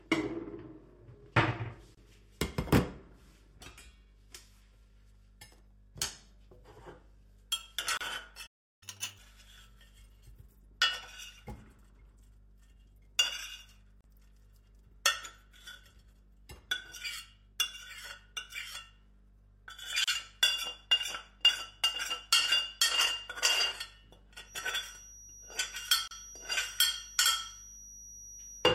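Separately encoded pieces were joined without trimming their encoder delay and final-frame padding, so a gap at each join opens at 1.95, 7.97, 14.01, 20.04 and 26.08 s, every 6 s. Each is a silence of about 27 to 34 ms with smeared edges, after which the sound resumes where it broke off.

At 8.46 s the output goes silent for about 350 ms in mid-flow, a playback stall. The likely cause is that the player ran out of data or its thread was blocked, and the sound picks up again at 8.83 s from where it stopped.

From 8.83 to 9.18 s the player works through its backlog by resampling at 2.0 times normal speed. This catch-up at higher speed raises both speed and pitch, by roughly 10 semitones, before playback settles back to normal.

From 24.42 s to the end a thin, steady feedback whistle at 5.8 kHz sits about 20 dB below the sound and swells and fades slowly in level. It likely comes from a loudspeaker-to-microphone loop held just at the edge of feedback.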